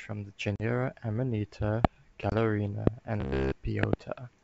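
Packet loss on an ADPCM call hits the speech at 0.56 to 0.62 s, where about 40 ms, a couple of packets, drops out into hard-edged silence. The decoder's predictor and step size lose track of the sender's, so the sound resumes with brief slight distortion. A second, shorter gap of about 20 ms follows at 2.30 to 2.34 s, with the same distortion on re-entry.

A loud pop cuts through at 1.85 to 1.87 s and again at 2.87 to 2.89 s, each a single sharp crack standing about 25 dB above the speech, which carries on beneath it. A double pop follows at 3.83 to 3.95 s. The likely cause is a sudden voltage step or pulse, from a plug, switch, static discharge or driver glitch, added into the signal path.

Robotic sound from repeated short buffers takes over from 3.20 to 3.55 s. The audio stops advancing and a fragment loops throughout, imposing a rigid metallic buzz at 66.7 Hz. That rate fits a 15 ms buffer being replayed while fresh audio is likely arriving too seldom.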